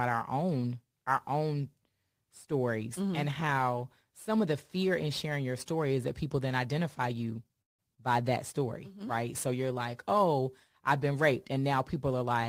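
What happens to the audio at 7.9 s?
At 7.9 s the speech is in repeated stalls (stutter), from 7.43 to 7.99 s, between "people then identify you" and "by that". Late packets emptied the jitter buffer four times. The last sound was held for about 220 ms in total, up to 170 ms at once. Nothing is lost, but the phrase drags and stutters.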